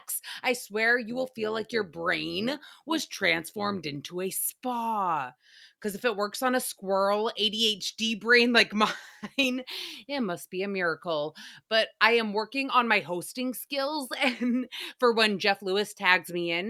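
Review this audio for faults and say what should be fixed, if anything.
From 1.10 to 3.96 s, between "I swear" and "a spa", the speech was split into windowed frames and rebuilt with an overlap whose windows don't add up to a steady gain, which is overlap-add ripple. Each frame boundary brings a level dip and rise of about 6 dB, repeating around 100 times a second. That is heard as a fast, buzzy flutter, a robotic tremolo riding on the voice. To prevent it, use an analysis and synthesis window pair and hop size that satisfy the constant-overlap-add condition.

From 8.97 to 10.29 s, ending just before "be a miracle", the call's bandwidth estimate fell and the encoder was pushed to a much lower bitrate. This is a call bitrate drop. The coarser coding makes the speech sound rougher and more smeared for about 1.26 s before clarity returns. That quality loss points to a fall from about 64 kbps to around 23 kbps. 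To prevent it, smooth the bandwidth estimator's reactions and keep a higher bitrate floor for speech.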